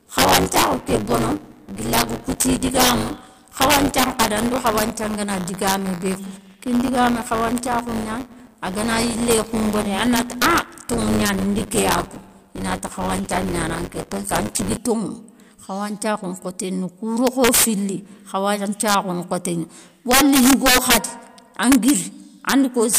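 Integer overflow runs through the whole of this speech clip. The level is pushed about 9 dB past full scale, and instead of being limited, the loudest peaks wrap around to the opposite extreme of the sample range. Only a small fraction of samples, around half a percent, cross the limit, but each one jumps the full range in a single step. The result is violent, sharp cracks on the loudest syllables, much harsher than ordinary clipping. Buffer tearing is heard from 0.0 to 14.77 s as a steady robotic buzz at 100 Hz that sits on the speech and disappears in pauses. The write and read positions in the playback ring buffer have drifted until they cross inside each period. As a result, roughly 15 percent of every buffer is filled with audio from one lap earlier, about 20 ms old, spliced in with hard joins on both sides. A 100 Hz repetition points to a buffer period of 10 ms, and the roughly 20 ms age of the stale audio fits a ring of about two such periods.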